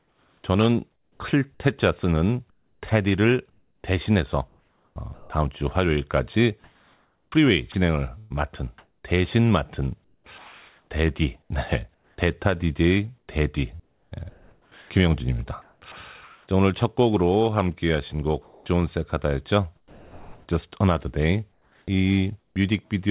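A sender's voice detector likely gating on and off causes sound chopped by the voice detector from 0.0 to 5.3 s, 7.3 to 16.48 s and 18.42 to 22.56 s. About 2.0 s, 3.0 s and 1.5 s of speech respectively give way to synthetic comfort noise, so syllable edges drop out, all within the call path's band that stops at 4 kHz.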